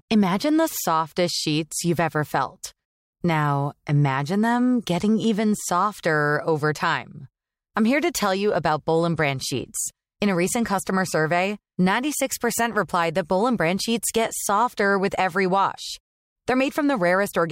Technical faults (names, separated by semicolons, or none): none